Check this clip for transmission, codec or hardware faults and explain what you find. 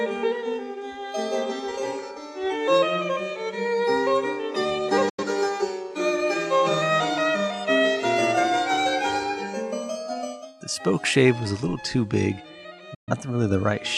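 There's a digital broadcast dropout here, twice. At 5.09 to 5.24 s and again at 12.94 to 13.12 s the sound fades out over about 8 ms, sits in silence, then comes back. The receiver lost good frames and muted until clean ones arrived. The first hole covers roughly 85 ms of programme, which fits a couple of lost frames, and the second about 128 ms, so maybe three. Whatever aired during those gaps is simply gone.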